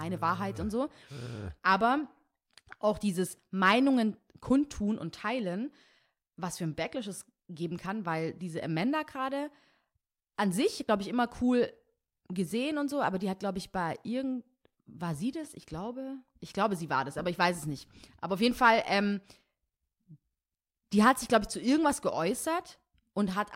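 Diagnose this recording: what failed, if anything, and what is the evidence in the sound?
Nothing in the signal chain fails here: the speech holds a continuous, steady level with an unbroken waveform and no audible disturbance at any point.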